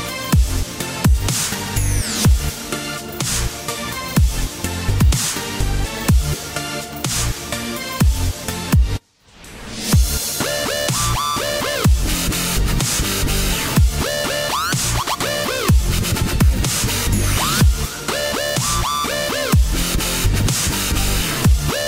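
No technical faults can be heard anywhere in this audio.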